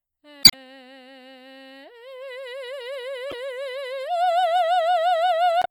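Music with three bursts of damaged data in the compressed stream, at 0.41–0.54 s, 3.29–3.34 s and 5.59–5.66 s, where corrupted frames make the decoder lose sync and emit short glitches.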